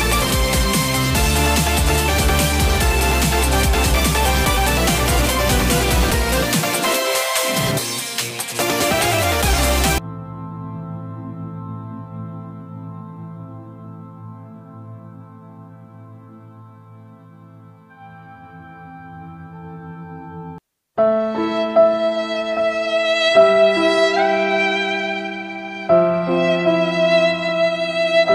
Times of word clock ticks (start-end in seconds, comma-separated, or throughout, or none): none